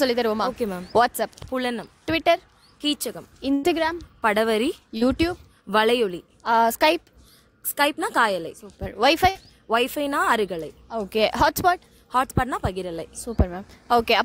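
A burst of packet loss at 3.53 to 3.65 s drops about 100 ms of audio. The receiver stretches the last sound into a fading buzz or hiss, then the sound resumes further on with that stretch gone. A short concealed packet loss at 4.97 to 5.03 s loses about 40 ms. The receiver fills the gap by extending the preceding sound and blending back, which leaves a brief smear or wobble. A second burst of packet loss at 9.29 to 9.37 s removes about 60 ms in the same way, with a shorter fade before the audio resumes.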